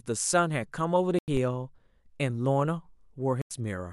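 Speech with two corrupt frame muted dropouts. The sound cuts abruptly to silence at 1.19 s for 0.19 s, and again at 3.42 s for 0.09 s. The decoder rejected damaged compressed frames, and silence replaced them. Timing is preserved, with nothing shifted.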